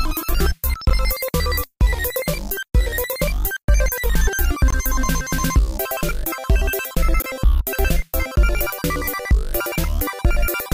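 A block of digital silence at 0.90 s, and again from 4.70 to 4.73 s and from 7.22 to 7.24 s: most likely the output buffer went unfilled, and the audio dropped to zeros with no fade. The first gap lasts about 11 ms, which fits a 512-sample buffer, and sounds like a tick. The later two last about 21 ms, which fits a 1024-sample block, and sound like short holes.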